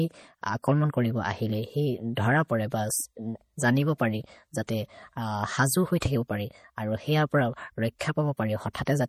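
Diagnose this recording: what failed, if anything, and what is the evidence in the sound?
MP3 compression, throughout the speech: the codec stage has failed. Nothing reaches above 15.8 kHz, a hard treble ceiling, and the damage is plainly audible as a watery, swirling texture with metallic chirps on s sounds. The likely cause is an MP3 encoder starved of bits, consistent with a low bitrate near 48 kbps, so it discards the top band and switches weak frequency lines on and off between frames.

Pre-echo at 3.98, 6.00, 7.99 and 8.73 s: each sharp onset is preceded by a brief hiss lasting 16 to 19 ms, and the attack itself sounds softened. This is also a codec fault. The transform spreads its quantisation noise across the whole block, so noise scaled for the loud attack leaks into the quiet stretch just before it.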